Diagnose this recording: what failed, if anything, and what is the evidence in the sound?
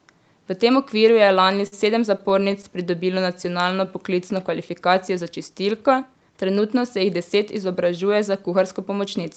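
The network feeding the receiver's jitter buffer delivered packets late or too slowly, and the buffer ran dry repeatedly, producing repeated stalls (stutter). From 1.25 to 1.74 s there are five gaps totalling 87 ms, the longest 51 ms, so concealment covers about 18% of that stretch. From 2.18 to 2.65 s there are five more gaps totalling 50 ms, none longer than 10 ms. The receiver extended the last sound to fill each hole, so nothing is lost, but the speech drags and hiccups.

Between 3.08 and 3.88 s the jitter buffer slowed playback to rebuild its reserve, a jitter buffer slow-down. It repeated single pitch periods and pieces of pauses, adding 81 ms, so the speech plays at 91% speed. The pitch stays unchanged, so the result is drawn-out, slightly sluggish delivery rather than a lower voice.

From 5.85 to 6.30 s the same buffer had accumulated more audio than its target and trimmed it back, a jitter buffer speed-up. 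It dropped short runs of pitch periods, removing roughly 70 ms, and playback ran at 112% of normal speed. The speech sounds briefly hurried at unchanged pitch. Throughout, the Opus call path band-limits the audio to 8 kHz, as expected for that codec setting.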